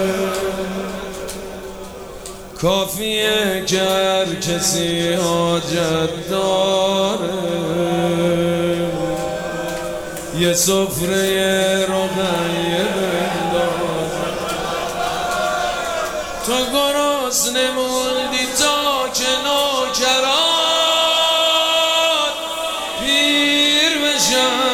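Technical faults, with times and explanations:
Throughout, hard clipping: crackle on the loudest peaks, driven about 4 dB past the ceiling, so a tiny fraction are cut flat, adding high harmonics.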